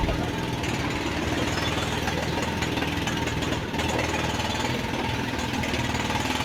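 No technical faults can be heard anywhere in the recording.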